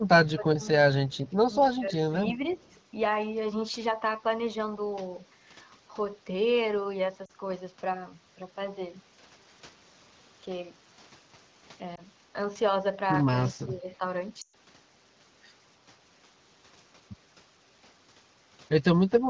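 Speech over a wideband mobile call, with its level repeatedly pulled down in the first few seconds. At 0.24 to 0.67 s and 1.74 to 2.13 s the speech sinks by up to about 20 dB, at 2.34 to 2.66 s by about 5 dB, and at 13.53 to 14.01 s by about 10 dB, dipping and thinning rather than carrying through. This is likely speech suppressed in double talk: with both ends talking at once, the echo canceller could not tell this talker from loudspeaker echo and turned the whole signal down. Faint delayed copies of the sound also appear at 1.10 to 1.31 s and 2.49 to 2.75 s, trailing the original by 312 ms and sitting about 35 dB and about 30 dB below it. That points to a likely echo leak, where a loudspeaker end's echo canceller let part of what its microphone picked up return down the line. Later come short breaks from lost AMR speech frames. At 7.25 to 7.32 s a 40 ms gap drops the sound to near silence, and at 11.95 to 12.01 s a 20 ms loss gives a small dip. 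At 14.41 to 14.54 s a 120 ms run drops the sound to near silence within two frames before it returns weak or rough. In each case the decoder filled in for corrupted frames by repeating the last good pitch and vocal tract settings at falling gain. The wideband HD Voice coding itself sounds clean, which fits a rate of around 16 kbit/s.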